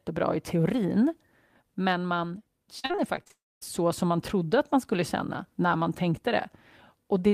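A speech recording with two connected transmission faults. Starting at 2.79 s, just after "i teorin men man", repeated packet loss (robotic sound) runs until 3.32 s. Seven short holes, the longest 42 ms, are each patched by stretching the preceding sound, so about a third of that half-second is synthetic fill rather than real signal. Roughly 180 ms of actual audio is gone, and the rapid alternation of real and concealed fragments gives the passage a choppy, robotic texture. From 3.32 s to 3.63 s the signal breaks off entirely: the last sound is briefly extended as a decaying buzz or hiss, then about 230 ms of near silence follows before speech returns with "så som man trodde". About 300 ms of audio is missing there, most likely a long network dropout following directly on the unstable stretch, with nothing of the lost portion recovered.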